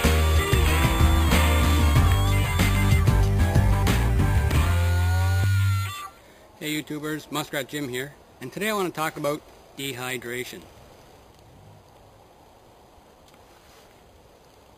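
From start to finish a bright, metallic fizz rides on top of the sound, rising and falling with its level. This is imaging from sample-and-hold upsampling: each sample was simply repeated to reach 44.1 kHz, with no smoothing filter. The fizz points to an original rate near 11 kHz, leaving a mirrored copy of the spectrum between about 5.5 and 11 kHz, roughly 19 dB below the signal.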